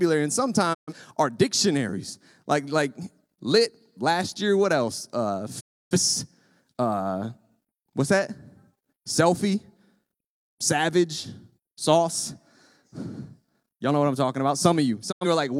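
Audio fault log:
0.73–0.93 s, 5.59–5.97 s, 15.11–15.26 s: digital broadcast dropout. The speech fades to silence over 20 ms, before "our dictionaries" and after "what I'm talking about". The receiver muted on lost or corrupt frames, so about 128, 299 and 85 ms of sound are gone, which fits frames of roughly 43 ms.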